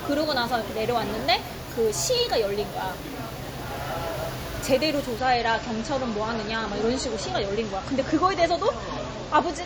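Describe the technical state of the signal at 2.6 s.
At 2.6 s the signal is intact, with no audible fault at that moment.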